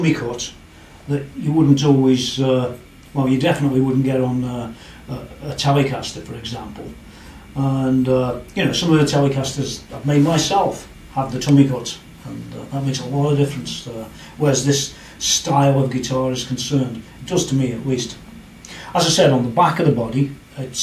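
No technical faults can be heard anywhere in this recording.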